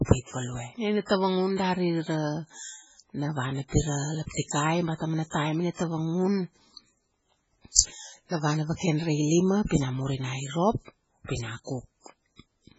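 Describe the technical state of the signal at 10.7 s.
At 10.7 s the speech sounds watery, with nothing above 7.7 kHz. This persists throughout. The likely cause is heavy MP3 compression, which fits a very low bitrate near 16 kbps.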